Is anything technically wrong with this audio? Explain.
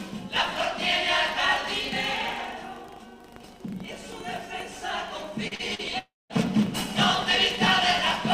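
Yes. There are short concealed packet losses and a longer dropout in the second half.

Short concealed packet loss occurs at 5.47, 5.55 and 5.75 s. Each time about 40 ms of audio failed to arrive, and the receiver bridged the gap by extending the preceding sound. The result is a quick smear or wobble.

A long network dropout follows at 5.99–6.33 s. The gap is about 0.3 s, likely from a stall in the network stream. The last sound trails off as a fading buzz or hiss and then gives way to roughly 0.2 s of silence before the audio resumes with that span missing, unlike the blended short patches.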